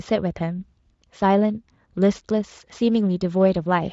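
No technical faults occur at any point in the speech, which passes through the Speex codec as intended.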